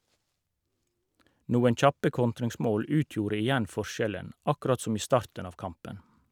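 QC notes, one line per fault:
Nothing stood out on listening to this speech clip.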